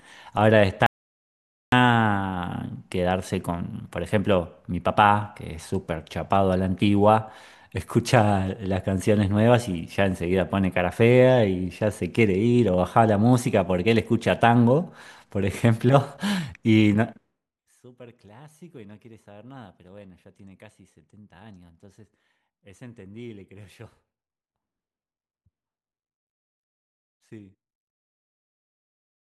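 The input to the recorder was likely lost for a moment, through a dropped connection or a stray mute, while writing continued with silence. At 0.86 s the speech cuts off mid-flow into an audio dropout to silence, dead silence with no room tone underneath, and resumes abruptly at 1.72 s. About 0.86 s of speech is simply missing.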